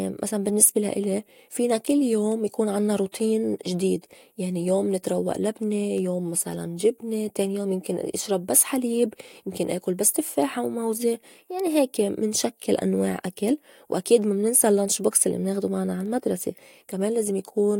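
Speech, with word clock ticks from 0.49 s to 16.97 s: about twenty sharp ticks, roughly one per second, as an unlocked receiving clock drifts some 20 ppm from the sender's and slips one sample each time. Their steady spacing sets them apart from random clicks or dropouts.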